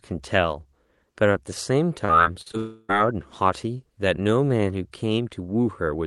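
From 2.05 to 2.55 s there's repeated packet loss, with six short gaps patched over, the longest about 45 ms, so the speech turns choppy and robotic. Right after, from 2.57 to 2.91 s, the sound stretches into a fading buzz, drops to near silence, and then comes back with about a third of a second gone, which is likely a long network dropout on the Opus call path.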